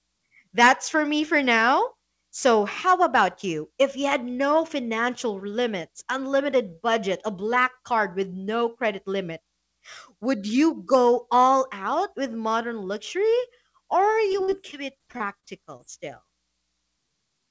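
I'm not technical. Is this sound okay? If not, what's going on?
No. From about 14.32 to 15.81 s, right after "with modern luxury or", the speech turns choppy and robotic. This is repeated packet loss: nine chunks of sound went missing in transit, the longest about 41 ms, and each hole was patched by stretching the sound just before it.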